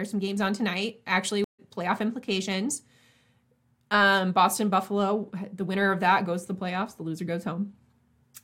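At 1.44 s, right after "games on tonight actually", the audio drops out in a stream reconnect. The connection broke and the player went quiet for about 143 ms, until 1.60 s. It then rejoined the stream and started a new decoder partway through. Playback does not pick up where it stopped. It resumes roughly 150 ms further on, at "playoff implications", so a short stretch of speech is skipped. The result is a brief silence followed by a jump forward.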